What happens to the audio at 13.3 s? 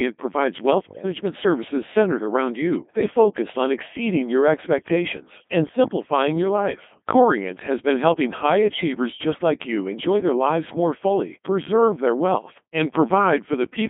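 At 13.3 s the speech is still going through the Codec 2 vocoder, which runs for the whole clip. The waveform is discarded and only pitch, voicing, energy and a coarse spectral envelope survive. The decoder rebuilds the voice from sine waves, at a very low rate that fits about 2.4 kbit/s, inside a narrow band of roughly 200 Hz to 3.5 kHz. The damage is heavy: the voice sounds robotic, buzzy and thin.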